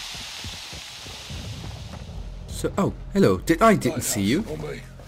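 From start to finish the audio carries crude rate conversion. Samples were repeated by nearest-neighbour picking, with no filtering, in a step pattern that points to a 44.1 kHz to 48 kHz change. The error sits roughly 25 dB below the signal and forms inharmonic tones, heard as a gritty fizz that rises with loud and bright passages. Unlike steady quantisation hiss, it tracks the signal and vanishes in quiet moments.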